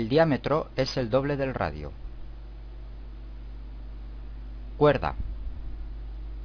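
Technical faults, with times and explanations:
No technical faults, with times or otherwise, can be heard in this clip.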